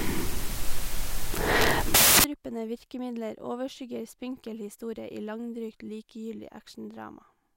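From 0.0 to 2.24 s the speech is buried in loud, harsh broadband noise, a case of samples built from the wrong bytes: each sample's bytes are combined in the wrong order or alignment, so the rapidly varying low-order bits end up dominating every value.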